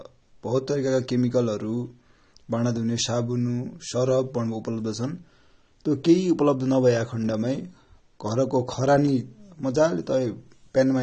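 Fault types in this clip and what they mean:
AAC compression: the speech sounds dull and smeared throughout, with nothing above about 9.6 kHz and a fizzy, warbling texture on sibilants and held sounds, which fits a low-bitrate AAC-LC encode of around 32 kbps, likely, where the encoder drops the top band and thins out quantised spectral lines.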